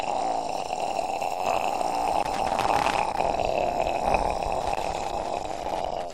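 Loose connector crackle breaks out from 2.19 to 3.18 s and again from 4.61 s to the end, as a worn contact chops the signal on and off. It sounds like irregular scratching and crackle, seen as jagged dropouts and spikes on the waveform and scattered broadband vertical streaks on the spectrogram.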